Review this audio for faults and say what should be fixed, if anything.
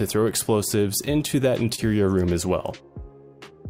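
Between 1.05 and 1.80 s the audio drags and stutters in repeated stalls (stutter): five brief hitches, the longest about 27 ms, where the last sound is stretched while the jitter buffer runs empty waiting for late packets, adding about 65 ms of filler without losing any content. A deeper adaptive jitter buffer would prevent it.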